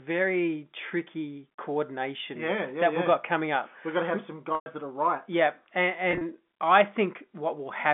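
Packet loss with pitch repetition at 4.55–4.66 s, after "got to have some", repeats the last pitch period into a buzzy fade over about 50 ms to bridge the 110 ms loss. At 6.11–6.21 s, 70 ms of scattered gaps cause brief held stutters through the telephone-band audio.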